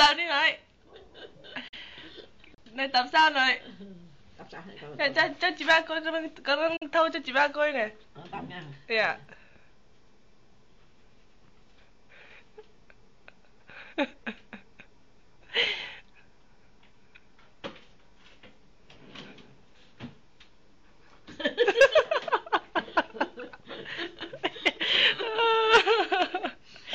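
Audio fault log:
1.68–1.77 s and 6.76–6.86 s, digital broadcast dropout: sound fades out over 8 ms into a short silence, fitting one lost frame of about 43 ms, then resumes.
2.54–2.58 s, CD skip: a brief mute of about 30 ms, then playback continues from a different point after the laser jumped tracks.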